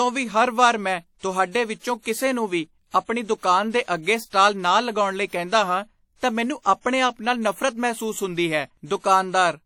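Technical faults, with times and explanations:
Throughout, WMA compression: the speech has a ringing, washy edge, with a hiss that swells and fades with the talking and quieter detail dropping out. That fits a long-block transform codec, likely WMA, squeezed to something like 48 kbps.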